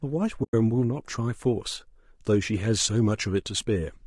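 Throughout the speech, the sound is rough and grainy, with noise filling the gaps between harmonics and a thin, synthetic-sounding top band. This is likely low-delay AAC compression (AAC-ELD): its short frames resolve pitch harmonics poorly, and the damage fits a low bitrate near 32 kbps.

From 0.43 to 0.54 s the sound fades smoothly into a hole roughly 100 ms long and fades back. This is AAC frame loss with muting: several consecutive frames went missing, the decoder zeroed their spectrum, and overlapping windows softened the edges.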